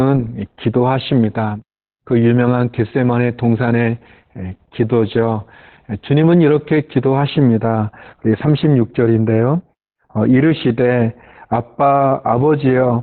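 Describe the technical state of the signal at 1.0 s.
At 1.0 s the speech is under Opus voice compression, which runs through the whole clip. The linear-prediction coder has narrowed the band and quantised the excitation coarsely, which points to a very low bitrate around 8 kbps. The voice sounds muffled, hoarse and slightly robotic. On a spectrogram, energy stops abruptly near 4.2 kHz, leaving a flat empty region above; harmonics look smeared in blocks consistent with 20 ms frames.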